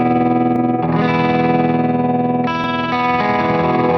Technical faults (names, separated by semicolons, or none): dropped buffer (overrun)